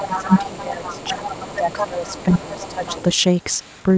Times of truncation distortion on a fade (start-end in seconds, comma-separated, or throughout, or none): none